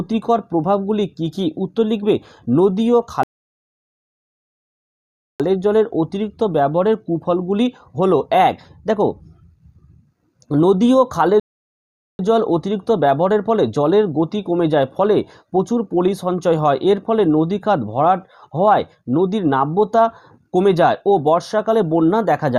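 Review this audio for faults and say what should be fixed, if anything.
Two rebuffering stalls here: the sound drops to silence from 3.23 to 5.40 s, adding about 2.16 s, and again from 11.40 to 12.19 s, adding 0.79 s. Each time the player simply ran dry of downloaded audio, waited for more data, then picked up exactly where it left off. So nothing goes missing, but the dead air stretches the timeline and breaks the flow. To fix it, give the player a deeper startup and playback buffer, or drop to a lower bitrate when throughput sags.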